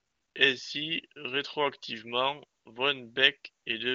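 A smooth, steady hiss replaces the real background from 0 to 0.35 s, again from 2.59 to 2.65 s, and briefly at 3.63 to 3.65 s. This is AMR comfort noise: the phone judged those moments silent, sent no speech frames, and the receiver synthesised filler noise.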